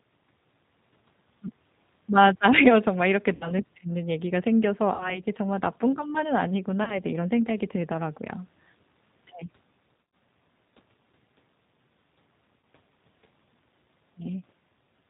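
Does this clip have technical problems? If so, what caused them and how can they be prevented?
Yes. Throughout, the call was carried by the G.729 codec at 8 kbit/s, which rebuilds speech from a vocal tract model and a few pulses per frame. Nothing above 4 kHz survives, and the speech sounds plainly rough and slightly synthetic. Using a wideband codec such as G.722 or Opus instead would prevent this.

VoIP packet loss concealed by the speech codec appears at 3.35–3.50 s and 4.94–5.21 s (about 60 ms lost each), 6.84–6.99 s (30 ms), 10.07 s (100 ms scattered over 160 ms, with the longest gap 40 ms) and 12.59–12.63 s (40 ms). Packets failed to arrive, so the decoder stretched its last pitch and filter settings into a buzzy tone or coloured noise that fades, and the speech stays weak or smeared briefly after packets return. Prioritising voice traffic on the network, adding forward error correction and using an adequate jitter buffer would prevent this.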